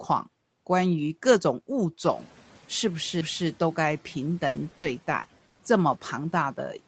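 At 3.21 s a CD skip occurs: the laser jumps to a different turn of the disc's spiral, so playback mutes for a few milliseconds and resumes elsewhere. It is heard as a short tick followed by an abrupt discontinuity in the speech.

From 4.47 s to 5.61 s there is repeated packet loss with a robotic sound. Eight gaps, the longest 80 ms, are each filled by extending the preceding sound. With about 28% of that stretch concealed, the speech turns choppy and robotic, with pieces audibly missing.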